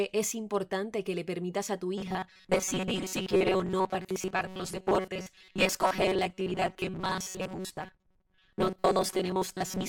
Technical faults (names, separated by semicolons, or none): robotic sound from repeated short buffers